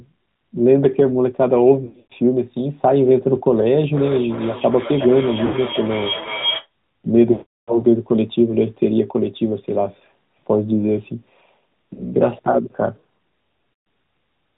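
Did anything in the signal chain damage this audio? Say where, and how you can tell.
Yes. The whole clip, which is speech, has passed through the AMR narrowband mobile codec at the codec stage. Nothing above 4 kHz survives, and the voice has a buzzy, synthetic edge, which points to a mid-rate mode around 10 kbps. A plain low-pass filter or a low sample rate would dull the top end but keep the voice natural. This pulse-driven vocal-tract model adds a reedy, artificial texture of its own.

Lost AMR speech frames at the network stage cause five breaks: 1.86 to 2.13 s (180 ms lost across 240 ms, the longest run 100 ms), 5.46 to 5.56 s (80 ms), 7.32 to 7.78 s (360 ms), 11.94 to 12.15 s (40 ms) and 13.72 to 13.86 s (140 ms). Each time, the decoder stretches the last good sound and fades it down, and the voice returns rough. A raw dropout or buffer underrun would instead give a hard gap or a click.

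A feedback howl runs from 3.93 to 6.70 s. A tone of roughly 3 kHz swells, with the loop repeating about every 400 ms, peaking about 9 dB below the speech. Its level grows on each pass instead of dying away, which separates it from ordinary acoustic echo. The cause is a room loop in the call path, where a second device's loudspeaker feeds back into a microphone, and the loop favours that frequency inside the 4 kHz band.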